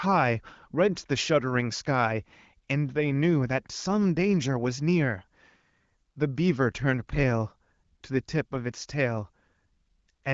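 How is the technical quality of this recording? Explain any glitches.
No glitches can be heard in this speech recording. It has the band-limited character of AMR wideband (HD Voice) coding, with nothing above about 7.5 kHz and only light codec colouring, which fits one of the higher rates, around 16 kbit/s.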